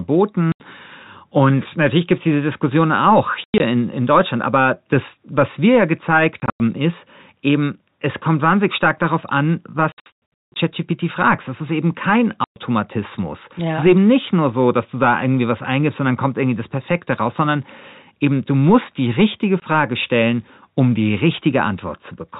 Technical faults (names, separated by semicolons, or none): packet loss filled with silence